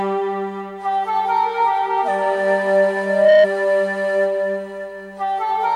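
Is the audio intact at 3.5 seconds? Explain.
Yes, just barely. A loudspeaker feedback squeal runs from 3.02 to 3.47 s: the microphone hears its own loudspeaker, and at 618 Hz the loop gain tops one, so a tone swells over roughly a third of a second to about 10 dB above the sound before cutting off just before 3.5 s.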